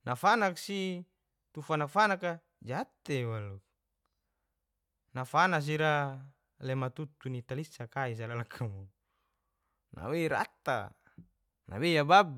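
Speech recording with no audible technical faults.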